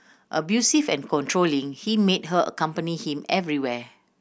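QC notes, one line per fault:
No technical faults can be heard anywhere in the speech recording.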